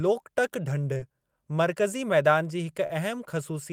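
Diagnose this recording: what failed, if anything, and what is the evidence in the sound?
Short concealed packet loss at 0.93 to 0.99 s and again at 2.86 to 2.91 s, a network-stage fault. In each spot about 20 ms of the speech never reached the decoder in time, and the receiver bridged the gap by extending the preceding sound for roughly 22 ms and 27 ms respectively before crossfading back into the real signal. The result is a brief smeared or wobbly patch, with the first gap stretched by a few milliseconds.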